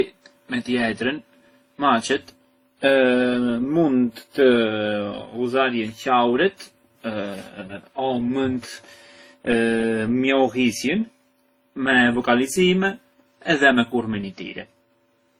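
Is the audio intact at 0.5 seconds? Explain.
No. At 0.5 seconds, as through the whole clip, the speech carries two layers of coding damage at once, most likely from transcoding between lossy codecs, one format re-encoded into another such as WMA into Opus. The second encoder spends bits reproducing the first one's artefacts, so swirly, smeared high end sits over a dulled top kept at the lower cut-off. Unlike a single low-bitrate encode, the artefacts have two distinct characters.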